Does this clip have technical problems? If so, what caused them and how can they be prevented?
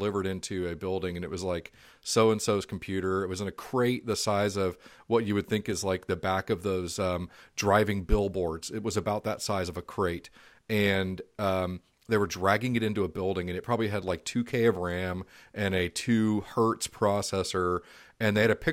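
No, there are no technical faults to report here.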